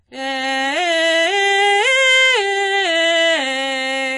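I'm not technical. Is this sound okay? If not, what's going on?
No. The music sounds dull and smeared throughout, with nothing above about 11.3 kHz. That is likely AAC compression squeezing the file too hard.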